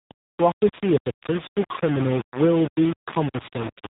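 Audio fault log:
throughout, low bit depth without dither: The speech carries a coarse, grainy distortion that moves with the signal. Quieter stretches break up into gritty steps, and the error sits only around 10 dB below the speech. The likely cause is samples rounded to very few levels with no dither, which fits roughly a 4-bit word. Because rounding error tracks the waveform, the grit rises and falls with the speech.
throughout, AMR narrowband mobile codec: The speech sounds boxed-in and buzzy, with a synthetic, phone-line quality and nothing above 3.8 kHz. The damage is plainly audible. This is AMR-NB, the narrowband mobile speech codec. It rebuilds the speech from a vocal-tract model excited by sparse pulses rather than keeping the waveform, and the thinness of that model points to a low mode near 8 kbps. Its 8 kHz sampling removes the upper band, so sibilants lose their edge and the speech sounds muffled and artificial.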